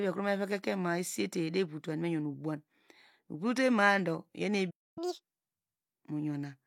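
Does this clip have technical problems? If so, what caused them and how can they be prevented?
Yes. A playback stall runs from 4.70 to 4.98 s: the speech cuts to silence for about 0.26 s, likely because the player ran out of buffered data or its thread was blocked. A larger buffer and a playback thread that is never starved would prevent it.

Catch-up at higher speed follows from 4.98 to 5.24 s: the player plays its backlog at double speed, raising the pitch by nearly an octave before returning to normal. Refilling the buffer at normal speed, or time-stretching without a pitch change, would prevent it.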